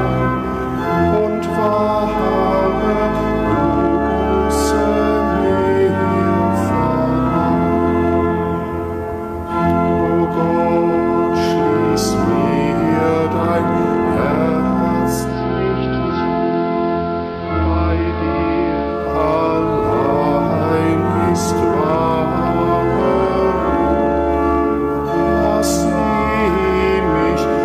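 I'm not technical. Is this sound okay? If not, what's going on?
No. Two things are wrong.

Throughout the clip there is hard clipping. Somewhere along the way the sound was pushed louder than the equipment could carry, so the tallest peaks were sliced off flat. Only a small share of moments go over the limit, so it isn't a constant fuzz. Instead, the loudest instants pick up a brief, gritty crackle and a slightly harsh edge.

From about 15.05 to 19.23 seconds there is digital radio blending to analogue. The radio lost its digital signal and switched over to the station's ordinary AM broadcast, crossfading in about 0.43 seconds, then switched back. During that stretch the sound turns dull and muffled. It also becomes slightly quieter, and a noticeable hiss sits underneath it.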